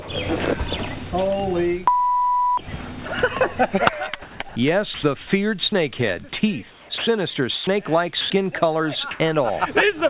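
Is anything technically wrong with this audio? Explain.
Yes. Over a call path limited to about 4 kHz, which fits a G.711 narrowband link, the sound has several brief gaps and patches of flat, artificial noise.

Sound dropped by the voice detector: at 0.02–0.08 s, 3.08–3.11 s, 4.49–4.55 s and 8.21–8.3 s, short bits of sound (30 to 50 ms) vanish into steady hiss. The sender's voice detector likely mistook quiet material for background and stopped sending, so the receiver filled the gap with comfort noise.

Comfort noise in place of the background: from 4.22 to 5.03 s, and again at 9.11–9.2 s, the natural background turns into a smooth, featureless noise. In the later patch the background sits about 21 dB below the loud parts and shifts by about 5 dB. This is likely discontinuous transmission, with the receiver synthesising noise during the pauses.

Sound chopped by the voice detector: between 6.71 and 7.67 s, the sound breaks up repeatedly. 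About 390 ms of it is replaced by fill. The detector likely toggled on and off several times, replacing sound with comfort noise.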